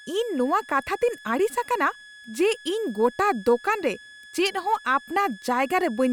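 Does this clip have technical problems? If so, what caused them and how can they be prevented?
Yes. A switching supply whistle runs through the whole speech clip. A thin high tone sits near 1.7 kHz, drifting between about 1.69 and 1.72 kHz, roughly 25 dB below the speech. A switching power supply is running in an audible burst mode or beating with another one. Use a linear or well-filtered supply, or shield and separate it from the audio path.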